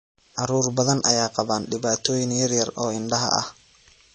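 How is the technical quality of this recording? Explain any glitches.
The recording has audible codec damage throughout, most likely from MP3 compression. Nothing reaches above about 8.3 kHz, so the speech sounds dull, and weak spectral detail flickers frame to frame, giving a watery, swirly texture and smeared consonants, which fits a low bitrate around 32 kbps.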